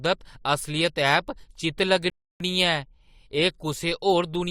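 At 2.10 s the speech drops into silence and stays silent until 2.40 s, a rebuffering stall lasting about 0.3 s. The player exhausted its downloaded audio and paused playback until more data arrived, then picked up at the exact point where it halted. No speech is skipped or repeated; the gap simply inserts roughly 300 ms of dead air, which is heard as an abrupt hold in the flow of the speech.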